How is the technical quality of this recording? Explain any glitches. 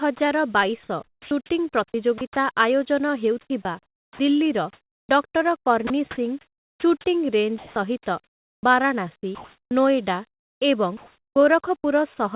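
The speech is choppy in two stretches. Nothing is heard above 4 kHz, which fits a narrowband call codec such as G.711 mu-law at 64 kbps.

From 1.04 to 2.21 s, and again from 3.41 to 11.36 s, quiet syllables and word edges drop out and are replaced by comfort noise, about 360 ms in the first stretch and about 2.9 s in the second. This is likely sound chopped by the voice detector: the sender's detector repeatedly judged the low-level speech as silence, stopped transmitting, and the receiver filled those gaps with generated noise.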